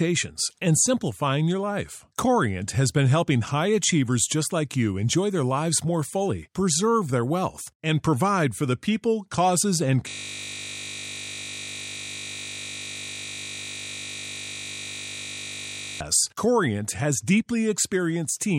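At 10.09 s the speech gives way to a system hang loop lasting until 16.01 s. The playback side stalled while the audio hardware kept reading the same ring buffer, so a 20 ms slice of sound repeats exactly, back to back, for nearly six seconds. At that length the repeats merge into a steady buzz pitched at 50 Hz, which points to a buffer of about 20 ms.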